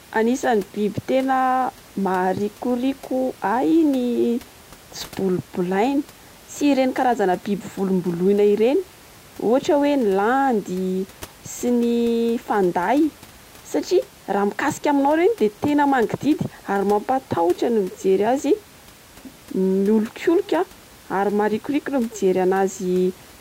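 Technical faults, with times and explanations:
Nothing stood out on listening, with only the room's own background noise audible at about 25 dB below the speech.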